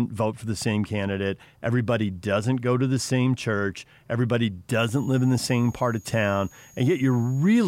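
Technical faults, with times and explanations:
4.79 to 7.68 s, switching supply whistle: a switching power supply in the chain runs in an audible burst mode or beats with another one, so its switching energy lands inside the hearing range instead of far above it. Under the speech this comes through as a thin, high whistle near 7 kHz, wandering between about 6.62 and 6.79 kHz as the supply's load shifts, sitting roughly 30 dB below the speech until the end.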